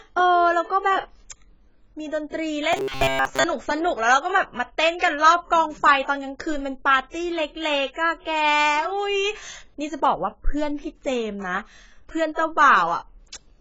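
Throughout, the speech sounds dull and smeared, with a warbling, fizzy edge, likely from heavy AAC compression at a very low bitrate, around 16 kbps. From 2.73 to 3.45 s it turns into a rigid metallic buzz at 134 Hz, likely robotic sound from repeated short buffers of about 7.5 ms, with most of that stretch repeated.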